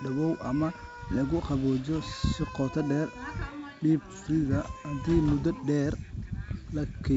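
Bit errors on an ADPCM link hit the speech at 2.80 s, from 4.65 to 4.68 s, and from 6.49 to 6.56 s. The first is a brief pop. The second is the harshest, a rough burst with a jump in level, consistent with a heavier error rate of under one percent. The third is a milder crackle. Each flipped bit disturbs the decoder's step size and predictor, so the damage rings on briefly. The G.722 wideband coding carrying the call can be heard holding detail up to 7 kHz.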